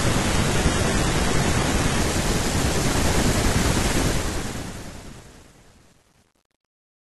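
Adaptive stream starting at a low bitrate, 0 to 2.0 s: the speech opens on a thin, low-bitrate version while the player is still measuring the connection. Nothing is present above 11.8 kHz, and the upper band sounds synthetic, with heavier codec smearing, which fits an HE-AAC stream near 16 kbit/s. At 2.0 s the quality jumps to a fuller, cleaner sound, consistent with AAC-LC around 96 kbit/s, with no gap in the audio.

Truncation distortion on a fade, 4.03 to 7.16 s: the fade-out that begins at about 4 s is itself smooth, but it was computed with too few bits and no dither, which points to a word length of about 9 bits. As the level sinks toward the smallest step, the waveform collapses into coarse square steps. From 4.62 s to 7.17 s the tail is at its worst, turning gritty.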